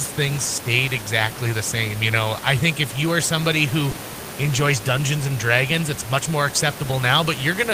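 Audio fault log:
3.91–3.95 s, short concealed packet loss: just after "you are somebody who", 20 ms never arrived. The decoder extended the preceding sound, leaving a brief smear.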